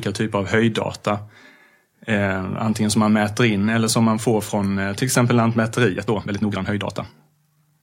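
A time-stretched section runs from 5.87 s, just after "från eh till exempel", to the end of the clip. The speech abruptly plays 1.53 times faster with unchanged pitch, sounding rushed, likely because software dropped short slices to squeeze the passage shorter.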